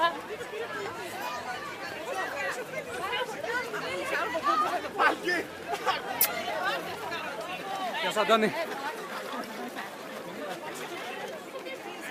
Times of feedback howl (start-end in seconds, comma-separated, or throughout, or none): none